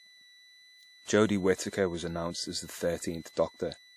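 From start to finish, a switching supply whistle sits under the speech as a high tone near 2 kHz, wandering only between about 1.97 and 2.01 kHz, at roughly 25 dB below the speech. A switching power supply is either running in an audible burst mode or beating against another supply, and its pitch holds almost fixed. Mains hum would be far lower and built on 50 or 60 Hz harmonics. A test tone would not drift at all.

Throughout the clip, the speech also carries plainly audible codec damage, likely from WMA compression at a rate that fits around 48 kbps. A transform codec with long blocks spreads its quantisation error across tens of milliseconds, so the speech sounds ringing and washy, and a hiss swells and fades with the speech. Nothing is present above about 19.3 kHz. Unlike a steady background hiss, this noise follows the signal rather than sitting at a constant level.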